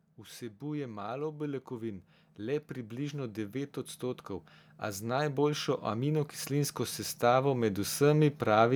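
Automatic gain rising: from 0.16 s to 8.71 s the gain control keeps lifting an input it judges too quiet, by about 17 dB, so speech and background swell together.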